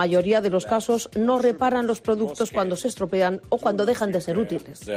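No technical fault can be heard anywhere in this audio.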